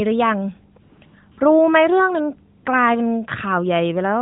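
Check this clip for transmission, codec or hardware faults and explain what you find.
One fault appears in this speech: AMR comfort noise at 0.82–1.02 s, 1.06–1.14 s, 1.32–1.38 s and 2.58–2.66 s. The sender stopped transmitting speech frames and the receiver filled each gap with smooth synthetic noise. On a spectrogram these show as flat, featureless blocks. On the waveform they appear as an even noise floor with abrupt edges. The narrowband mobile codec carrying the speech cuts everything above 4 kHz, with light coding texture.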